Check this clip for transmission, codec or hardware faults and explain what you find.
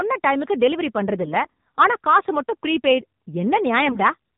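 The clip carries one fault from start to finish: AMR narrowband mobile codec damage, plainly audible throughout the speech. Nothing reaches above about 4 kHz, which points to 8 kHz telephone sampling. The codec rebuilds the voice from a vocal-tract model excited by a few pulses per 5 ms subframe, and at what sounds like a low mode near 7.4 kbps that leaves a buzzy, synthetic edge. A simple low-pass filter would dull the top end but keep the voice natural; here the speech itself sounds manufactured.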